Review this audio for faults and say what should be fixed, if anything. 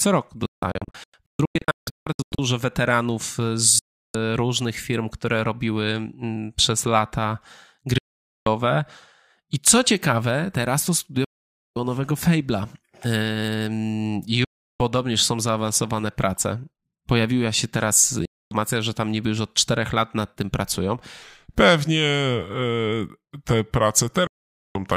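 Digital broadcast dropouts occur at 0.46 to 2.39 s (several short holes, longest 160 ms), 3.79 to 4.15 s before "różnych firm które robiły", 7.98 to 8.47 s, 11.24 to 11.76 s after "ciekawe teraz to studio", 14.44 to 14.80 s, 18.25 to 18.52 s between "się teraz" and "że tam niby już", and 24.27 to 24.76 s. In each, the receiver rejects corrupted frames and mutes with a 3 ms fade, so that audio is lost.

A section at the wrong speed runs from 21.22 s to the end, playing at 0.867 speed so the speech is slower and about three semitones lower, likely from playback against the wrong clock.

To prevent these, improve reception or add error protection, and lock the playout clock to the source rate so the final section is not resampled.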